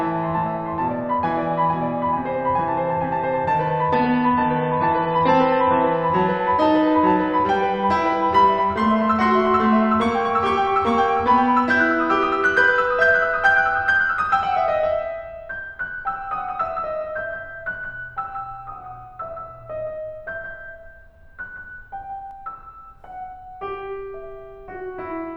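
An adaptive stream at a lower bitrate runs from 3.94 to 5.94 s. The music abruptly loses everything above 6 kHz and turns smeared and watery, which suggests a drop from about 128 to 24 kbit/s MP3 as the connection slowed. Full quality returns without any gap.

A doubled audio track appears from 16.37 to 22.31 s. A full-band copy of the music trails around 150 ms behind, roughly 5 dB quieter, with no decay or room colour. It starts and stops abruptly, likely from a second, slower capture path.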